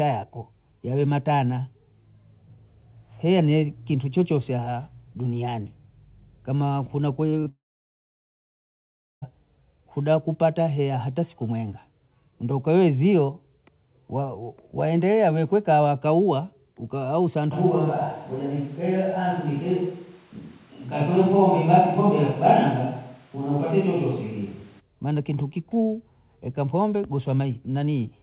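Speech heard over a narrowband call path, with nothing above 4 kHz as a G.711 mu-law link at 64 kbps would give, breaks up in a few places. Brief smears at 7.30–7.34 s, 7.40–7.44 s and 7.44–7.48 s are short concealed packet loss: about 20 ms of audio each time arrived too late, and the receiver patched the gap by extending the preceding sound before rejoining the real signal. Straight after, from 7.48 s to 9.24 s, the sound trails off into a fading continuation and then goes quiet for about 1.6 s before resuming further along, with roughly 1.7 s of speech gone; this is likely a long network dropout, where no packets came through and concealment gave way to silence. From 17.54 s to 24.79 s the speech suddenly turns roomy and hollow, thinner in the low end, with room noise about 35 dB below it and little change in overall level, and snaps back just as abruptly at the end; the likely cause is a switch to a distant microphone while the close one dropped out.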